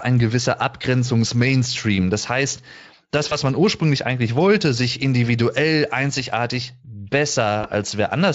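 At 3.29 to 3.38 s and again at 7.61 to 7.68 s the speech briefly smears into a stretched, fading sound and stays weak or distorted for tens of milliseconds afterwards. This is VoIP packet loss concealed by the speech codec. The gap fits a single lost 20 ms frame, which the Speex decoder filled by extrapolating its last pitch and filter.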